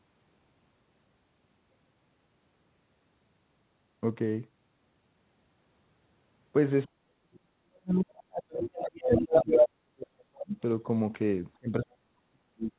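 From 6.86 to 10.57 s the speech dips and breaks into pieces, falling by roughly 40 dB at its deepest. This is speech suppressed in double talk, likely because the echo canceller could not tell the talker from the loudspeaker echo while both sides spoke. A network dropout would cut everything at once. Here only the talker is turned down, in uneven stretches. The same suppression returns from 11.55 s to the end.

Inside that stretch, a second voice from the other side leaks through at 8.61 to 8.81 s, about 10 dB below the speech. It returns from 9.06 to 9.68 s, about 5 dB above it. This is likely residual echo the canceller failed to remove. Unlike the suppression, it adds a separate talker rather than weakening the main one.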